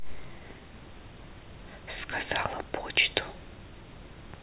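No technical faults are audible.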